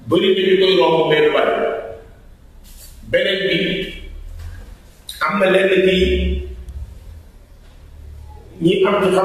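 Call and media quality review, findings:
DAB burbling, 3.87–3.96 s: brief blips of noise over the programme. Probable component: DAB receiver/MP2 decoder. A low residual bit error rate slipped past error correction, corrupting sub-band samples over a few frames. Spectrogram: isolated band-limited blocks.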